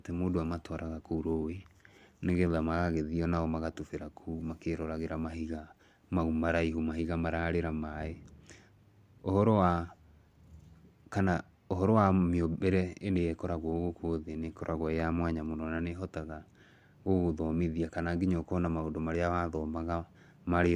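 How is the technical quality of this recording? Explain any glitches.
No glitches are audible anywhere in this speech recording, so there is nothing to explain.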